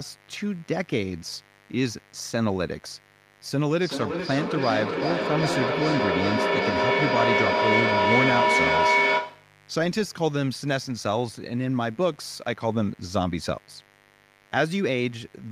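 A steady, raspy buzz sits under this speech recording for its whole length, roughly 30 dB below the talker. This is mains buzz at 50 Hz. Something like a dimmer, a rectifier or a missing shield is letting sharp switching spikes into the signal twice per mains cycle, so harmonics of 50 Hz climb well into the kilohertz range and give the hum its gritty edge rather than a pure low tone. From 3.7 s to 9.61 s the speech comes back at a fixed interval of roughly 400 ms, each repeat thinner and more ringing. The repeats build up until they peak about 3 dB above the speech itself. This is a feedback echo between two devices. Two devices in the same room are on one call, and one replays what the other's microphone picked up. That microphone then captures it again. Neither echo canceller removes the other device's output, so the loop keeps feeding itself.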